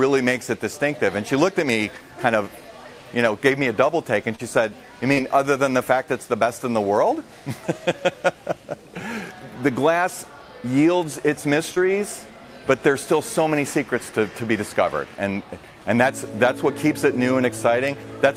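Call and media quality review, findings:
Short concealed packet loss at 4.35–4.41 s, 5.13–5.19 s and 11.75–11.78 s: brief smear or wobble where receiver concealment filled about 36, 35 and 14 ms of 40, 40 and 20 ms gaps. Spectrogram shows smoothed, repeated texture; waveform shows a cross-faded join.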